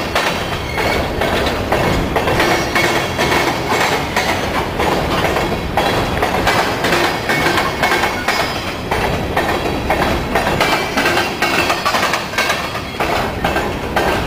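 No technical faults turn up anywhere in this audio. Nothing in the sound points to a dropout, glitch or distortion that would need explaining.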